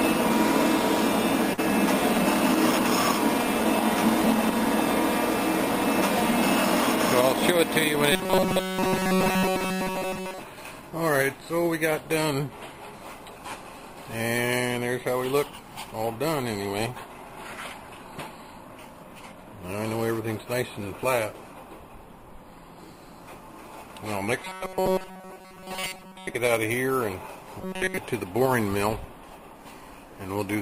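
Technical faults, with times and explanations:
1.53–1.60 s and 24.57–24.62 s: short concealed packet loss. About 40 ms of audio never arrived in time, so the receiver stretched the preceding sound to fill the hole, 41 ms and 32 ms respectively, then blended back, leaving a quick smear or wobble.
8.12–10.39 s, 24.42–26.35 s and 27.61–27.97 s: robotic sound from repeated short buffers. Each stretch has a rigid, metallic buzz at 188 Hz that covers nearly all of the first and last stretches and most of the middle one. The likely cause is a roughly 5.3 ms chunk being looped while fresh audio is skipped.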